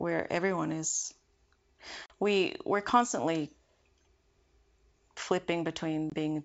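At 2.06 s, packet loss on an ADPCM call cuts a 40 ms hole, about two packets, just before "we we're". The decoder's predictor loses track, so the speech returns with brief distortion. At 6.10 s, a single 20 ms drop repeats this.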